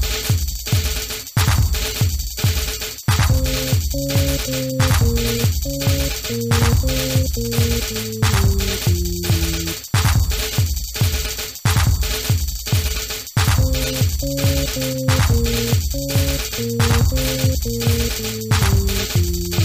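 No technical faults are audible.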